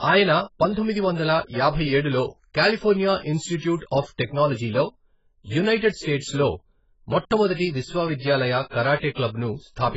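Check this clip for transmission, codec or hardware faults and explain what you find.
One codec fault runs through the whole speech clip. AAC compression, from start to finish: nothing sounds above 7.6 kHz, and the spectrum is heavily thinned, likely from AAC-LC at a very low bitrate near 12 kbps. The coarse quantisation leaves the speech dull and smeared, with a warbling, fizzy edge on sibilants.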